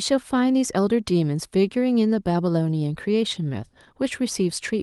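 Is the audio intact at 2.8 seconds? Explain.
Yes, at 2.8 seconds the speech runs through intact, with no dropout, click, distortion or other fault at that moment.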